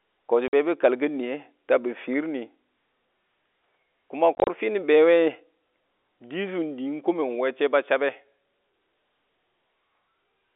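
At 0.48 s, a 50 ms hole, and from 4.35 to 4.47 s, 80 ms of gaps scattered in runs up to 30 ms: packet loss filled with silence, which fits 10 ms packets. Unlike concealment, nothing replaces the lost audio. The telephone-band G.711 sound continues around the holes.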